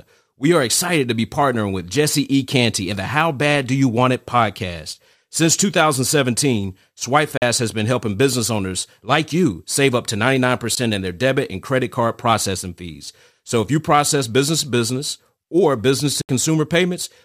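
Speech with three Bluetooth dropouts: silent holes at 7.37–7.42 s before "has been helping business", at 10.75 s before "in their debit and", and at 16.21–16.29 s after "to business or business". Each gap is a silent hole and the speech resumes further along, skipping 43.5, 14.5 and 72.6 ms of audio. The likely cause is wireless packets arriving too late and being discarded.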